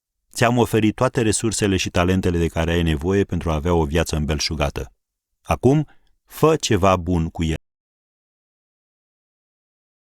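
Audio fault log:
7.56–10.09 s: audio dropout to silence. The input path most likely lost its source, through a disconnected device, a failed link or a mute, while recording carried on writing silence. After "fă ceva bun cu" the speech stops mid-flow into total silence, with no room tone, through to the end.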